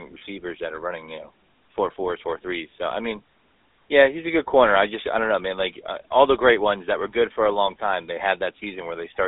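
A speech recording carries GSM full-rate codec damage for its whole length. The band is confined to a telephone line, roughly 300 Hz to 3.7 kHz, with nothing at all above 3.9 kHz, which removes sibilance and air. The codec rebuilds the voice from a vocal-tract model excited by a sparse, regularly spaced pulse train, and that coarse excitation produces a plainly audible buzzy, gravelly roughness, which fits a 13 kbps full-rate channel.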